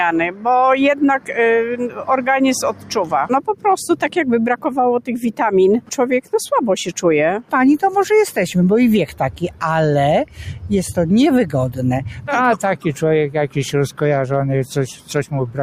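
A noise suppressor applied to music or sounds runs throughout, treating steady tones and tails as noise, so the level swings by roughly 10 dB and the sound pumps and thins. Sound cut by the noise suppressor comes at 0.29–0.46 s, 1.19–1.35 s, 1.84–2.05 s, 2.72–2.94 s, 3.47–3.65 s and 9.35–9.62 s, where held sound sinks by about 8 to 11 dB for a fraction of a second before recovering.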